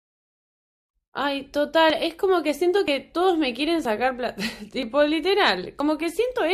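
A speech recording with audio missing between chunks: five short skips at 1.90, 2.88, 3.85, 4.83 and 5.80 s, each dropping roughly 30 ms and butting the two sides together. The steady spacing likely reflects a chunked recorder losing audio at each one-second chunk boundary. A waveform shows abrupt joins there, and a spectrogram shows thin vertical seams.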